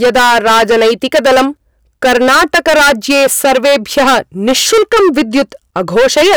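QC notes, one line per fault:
Throughout: hard clipping. The speech is driven roughly 18 dB past what the signal chain can carry, so nearly a third of the waveform is pressed against the ceiling and sliced flat. Those squared-off peaks generate a dense series of high harmonics, which is why the result is not just crackle on the loudest moments but a continuous harsh fuzz riding on every voiced sound.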